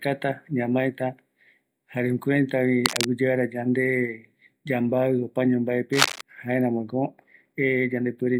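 A worn cable or connector was likely being moved, so its contact resistance changed rapidly. This produced cable scratch noise: uneven, dense scratching bursts roughly as loud as the speech. They occur from 2.85 to 3.05 s after "jare jukuraitavi" and from 5.92 to 6.21 s after "yande yambavi opaño".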